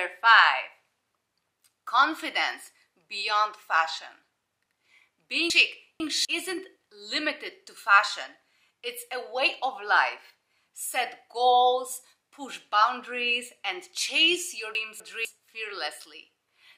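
From 5.5 to 6.25 s, chunks play out of order. One 250 ms chunk arrives two chunks late and sounds after them. The moment jumbles at the hard joins. From 14.75 to 15.25 s, a chunk one place late swaps order the same way.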